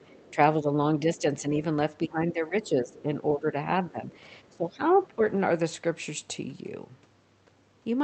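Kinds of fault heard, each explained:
Other side's voice leaking through: From 0.02 to 0.31 s, and in brief scraps at 4.49 to 4.56 s and 5.03 to 5.07 s, a faint second voice sits under the speech, roughly 30 to 40 dB down. The talker's device is playing the far end on a loudspeaker, and the microphone picks it up again. The likely cause is an echo canceller that did not strip all of that loudspeaker sound out before sending.
Speech suppressed in double talk: At 0.31 to 0.69 s, 1.0 to 1.62 s, 2.04 to 4.05 s and 4.51 to 5.25 s, the talker's level sinks while the far end is also active. The dips are shallow, a few dB, in the first two spans. In the later two they go much deeper, around 15 dB, over long stretches. Both sides are talking at once, and the canceller likely cannot tell the talker from the returning echo, so it turns everything down together.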